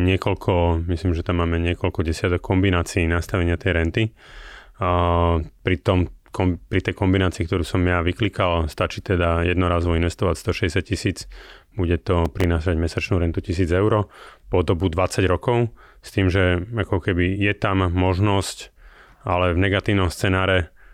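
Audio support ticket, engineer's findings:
Processor overload crackle, 12.25 to 12.44 s, between "tisíc bude" and "mesačnú rentu". Short gritty tearing over the speech. A handful of buffers, roughly 3 ms each, missed in a row on a busy CPU, each gap plugged with stale audio, hence the hard-edged clicks.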